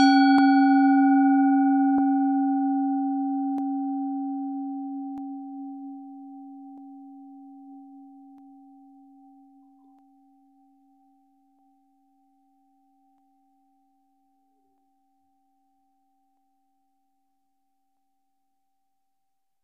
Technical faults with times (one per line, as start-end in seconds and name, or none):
0.38-19.57 clock drift buffer slips